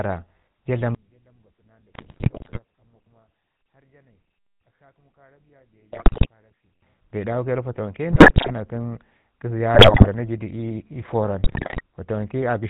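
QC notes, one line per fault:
Throughout, GSM full-rate codec: the speech has a buzzy, gravelly roughness that stays steady from start to finish, and nothing reaches above 4 kHz. This fits 13 kbps full-rate GSM, which models the vocal tract and drives it with a sparse, regularly spaced pulse excitation. That coarse excitation causes the grain. Unlike the bit-error bursts below, it never breaks into squawks or level jumps. It is a constant texture.
0.95–6.82 s, one channel inverted: the centre of the mix drops by about 36 dB, leaving only a faint residue of the speech. When the channels are summed, everything common to both cancels and only their small difference survives. A polarity flip on one channel is the likely cause. A dropout or gain fault would remove the signal outright or scale it evenly. Here the level falls off a cliff at 0.95 s, and the remainder points to cancellation.
1.94–2.60 s, 5.92–6.26 s, 8.12–8.51 s (right after "dawu ke nan fatawanke"), 9.74–10.08 s (just before "na ji du ii"), 11.44–11.81 s, GSM bit errors: five short bursts of squawks, pops and gargling, each lasting roughly a third to two thirds of a second. 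They fit a weak radio link feeding corrupted filter, pitch and gain values to the decoder, which bends the spectrum and makes the level spike frame by frame. These bursts are brief, which separates them from the steady codec roughness.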